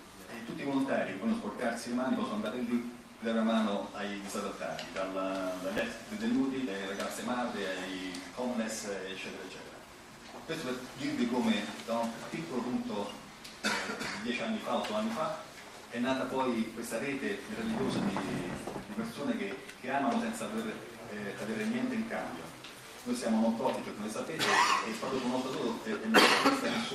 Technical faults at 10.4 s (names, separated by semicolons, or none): jitter buffer speed-up